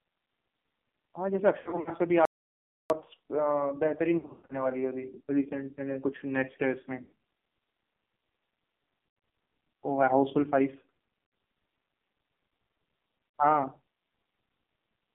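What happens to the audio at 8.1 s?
At 8.1 s the speech is still going through the AMR narrowband mobile codec, as it is for the whole clip. A coarse vocal-tract model rebuilds each 20 ms frame, and the heavy damage fits a rate near 5.9 kbps. The sound stays between 200 Hz and 3.6 kHz, thin, buzzy and synthetic.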